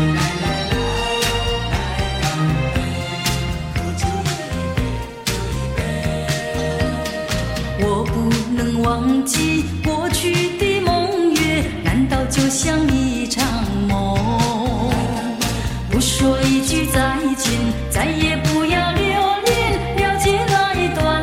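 Nothing stood out as a fault on listening.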